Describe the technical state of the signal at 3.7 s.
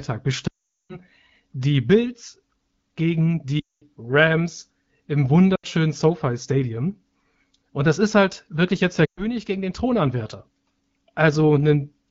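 At 3.7 s you're inside a run of lost AMR speech frames, from 3.60 to 3.85 s, about 220 ms. The wideband decoder holds the last pitch and vocal tract settings with falling gain, so the sound smears briefly, fades to silence, then returns weak or rough.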